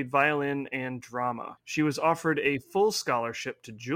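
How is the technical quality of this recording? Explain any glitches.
The recording carries one fault that persists from start to finish: sample clock jitter. The converter's timing reference wanders by something like a microsecond or two, so each sample is captured slightly early or late. Where the speech waveform changes quickly, that small timing slip becomes a noticeable amplitude error, here around 40 dB below the signal. It is heard as a faint hiss or grain riding on the voice, strongest on loud and bright sounds such as sibilants, and gone in the pauses.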